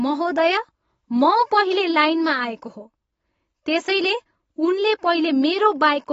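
From start to finish the speech sounds dull and smeared, with nothing above 7.6 kHz and plainly audible codec damage. That points to AAC compression, most likely AAC-LC at a low rate that fits roughly 24 kbps. With that few bits, the encoder lowers its cut-off and quantises the spectrum coarsely against its hearing model. It throws away the top end and blurs detail, which leaves the sound muffled and smeared throughout.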